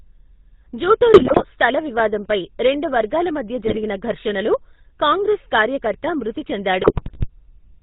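GSM full-rate codec damage runs through the entire clip. The speech is reduced to a vocal-tract filter driven by sparse, regularly spaced pulses, with nothing passed above 4 kHz. This gives a plainly audible buzzy, gravelly roughness, consistent with the 13 kbps full-rate coder.

GSM bit errors strike from 1.14 to 1.45 s, just before "స్థల వివాదంపై రెండు వర్గాల". They return from 3.66 to 3.77 s, between "వివాదంపై రెండు వర్గాల మధ్య" and "ఘర్షణలో కాంగ్రెస్", and again from 6.8 to 7.27 s. Corrupted filter, pitch and gain values bend the spectrum and jolt the level frame by frame, producing squawks, pops and gargling. The bit error rates are about 3.7, 3.4 and 2.9 percent.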